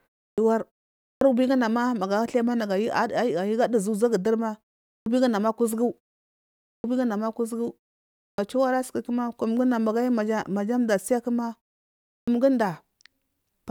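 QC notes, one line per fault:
0.30, 1.13, 4.98 (just after "duzu uzaguduri"), 6.76, 8.30 and 12.20 s: clipped start after a pause. After each 0.3 to 0.84 s silence, the sleeping output device wakes late and swallows 75 to 82 ms, so speech starts abruptly without its first sounds.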